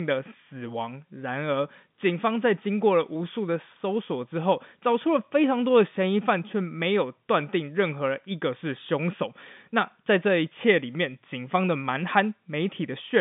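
Speech recording with no technical faults to report. It carries the narrow band of G.711 telephone coding, running from 150 Hz to 3.6 kHz with nothing above 3.7 kHz.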